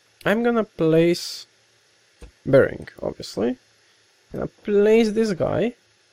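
No technical faults are audible.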